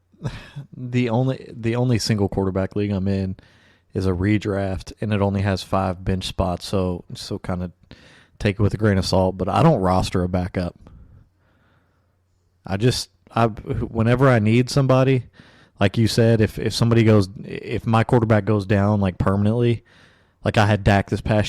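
Hard clipping runs through the whole speech clip: the signal was driven about 7 dB past what one stage could pass, so every peak above the limit was cut flat. Only a small fraction of samples, under one percent, hit that ceiling, so the damage is heard as brief crackle on the loudest syllables. On a waveform the peaks show as flat-topped plateaus. A spectrogram shows broadband vertical streaks of harmonics reaching high up at those moments.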